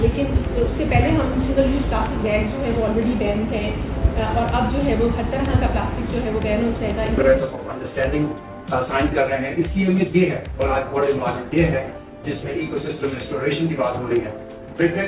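No technical fault can be heard anywhere in the audio. It has come through a WebRTC call path, and the narrow telephone-band sound with nothing above 4 kHz fits the G.711 mu-law codec working as intended.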